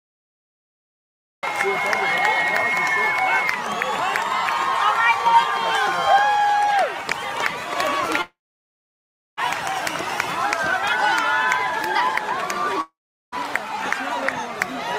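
The capture began late, so the clip opens with a cut-off start: digital silence runs from 0 to 1.43 s, and the sound then enters abruptly at 1.43 s already in progress, with no attack or fade-in. The sudden jump from dead silence to full signal leaves a hard edge.

Two gaps follow, and each sounds like a long network dropout, most likely incoming audio that never arrived. From 8.21 to 9.39 s, about 1.16 s is missing. The last sound is stretched into a short buzz that fades within roughly a tenth of a second, leaving about 1.0 s of silence before the audio resumes further along. From 12.81 to 13.34 s the same thing happens on a smaller scale: about 0.52 s is lost, a brief decaying buzz gives way to roughly 0.4 s of silence, and the audio picks up past the missing part.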